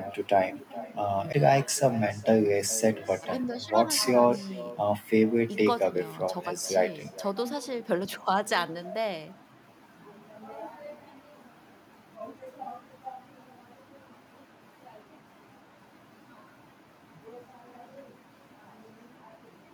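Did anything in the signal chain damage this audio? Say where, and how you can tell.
Yes. Call processing is the first culprit: an echo with no canceller runs through the whole speech clip. A quieter, thinner copy trails everything by around 0.4 s at about -18 dB. The far end's loudspeaker feeds its microphone, and nothing subtracts that return.

The playback stage has a CD skip at 1.32 s. A tick and a very brief mute are followed by a discontinuity in the speech. The laser jumped to another turn of the disc's spiral, so playback resumed from a different point.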